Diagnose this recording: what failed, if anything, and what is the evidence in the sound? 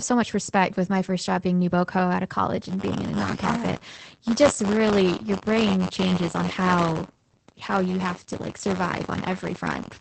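The speech sounds muffled and slightly hoarse throughout, with a faintly robotic edge and nothing above about 8.5 kHz. This is Opus voice compression damage at the codec stage. At around 12 kbps the encoder is in SILK mode at wideband, coding 20 ms frames with a linear-prediction model and a coarsely quantised excitation. That coarse excitation gives the hoarse, synthetic texture, and the wideband limit cuts the top octave, so sibilants lose their crispness.

From 2.65 s to the end at 10.00 s, a steady robotic buzz of about 93.8 Hz rides on the speech, rattling wherever there is signal. This is buffer tearing at the driver or buffer stage. The writer and the hardware reader of a ring buffer have drifted until they cross inside each period. A small sliver of every buffer, roughly a twentieth of it, then replays audio a few tens of milliseconds old, with hard joins on both sides. The repeat rate fits a 512-sample buffer.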